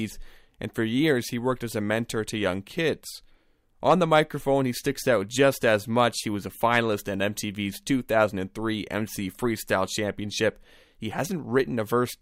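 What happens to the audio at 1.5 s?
Nothing goes wrong at 1.5 s; the speech runs through that moment intact, with no dropout, click or other fault.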